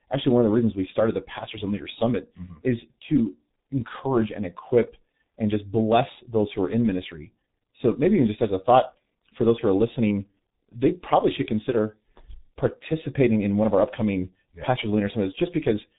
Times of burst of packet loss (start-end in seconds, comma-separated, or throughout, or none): none